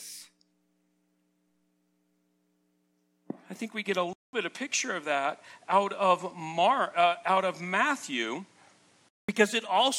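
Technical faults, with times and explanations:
4.13 to 9.29 s, input switched to a poorer device. After "think we get a" comes a 0.2 s gap. Then nothing remains above 11.8 kHz. A new noise floor sits about 35 dB down. Level stays roughly the same. Another microphone or headset profile is the likely cause.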